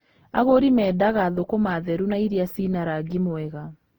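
The speech has most likely been through generation loss, decoded and re-encoded about seven times with a codec whose character fits Opus at around 48 kbit/s. Each pass re-quantises on a shifted frame grid, so throughout the clip the sound turns swirly, hollow and smeared, with blurred attacks, despite content reaching 20.1 kHz.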